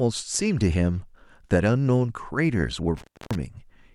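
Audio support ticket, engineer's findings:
Speech drops out abruptly 2.97–3.35 s, crackle at both edges, faint hiss in the gap, which lasts about 0.29 s. Intermittent contact. Probable component: loose cable or plug in the signal chain. Mechanism: the connection briefly opens, so the signal is lost, and the contact scraping as it breaks and remakes produces the crackle. Check and reseat connectors, and replace the cable if the dropout recurs.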